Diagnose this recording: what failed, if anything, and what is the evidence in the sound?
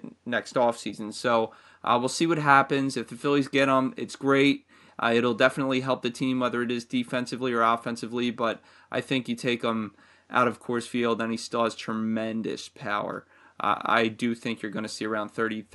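Nothing in the signal chain has failed: the speech sits well above a steady room noise about 45 dB below it, which belongs to the space around the microphone rather than to any stage of the system.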